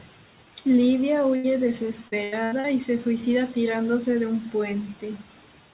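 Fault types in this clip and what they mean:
Burst of packet loss: A short run of packets was lost or arrived too late, so the receiver stretched the last speech for about 78 ms while fading it, then skipped ahead. Around 1.36 to 1.47 s, roughly 80 ms of speech is missing.
Repeated packet loss (robotic sound): Packets kept dropping from 2.08 to 2.67 s, just before "y se suicida tirándose". Four gaps, the longest 82 ms, were each patched with repeated sound, covering 41% of that stretch. The result is choppy speech with pieces missing.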